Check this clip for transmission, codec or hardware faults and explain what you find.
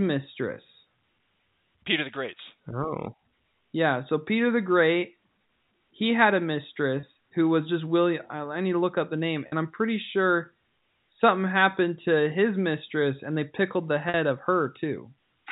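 The speech has three brief dropouts concealed by packet loss with pitch repetition. The first, at 7.00 to 7.03 s, falls after "he had a" and before "who was just". The second, at 9.48 to 9.52 s, comes after "look up the name" and before "I'm pretty sure something". The third, at 14.09 to 14.14 s, follows "and they pickled the". The gaps last about 30, 40 and 50 ms, which fits runs of three, four and five 10 ms packets.

In each gap, the receiver loops the last pitch cycle and fades it, so the voice briefly holds a slightly buzzy tone. On a waveform, identical repeated periods shrink in amplitude. On a spectrogram, the harmonics run flat and unchanging for that short stretch. The G.711 A-law telephone band carries the sound up to 4 kHz.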